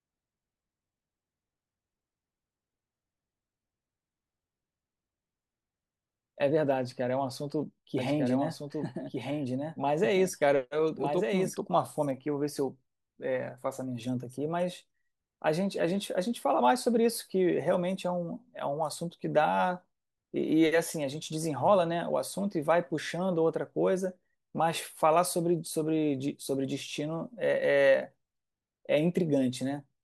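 Speech that, from 7.98 s to 11.56 s, carries a second full-band copy of itself trailing about a second behind and somewhat quieter, around 5 dB down, with no decay or room colour. It cuts in and out abruptly at those points. This is a doubled audio track, most likely the same signal being captured again through a slower path, or an edit leaving two copies laid out of step.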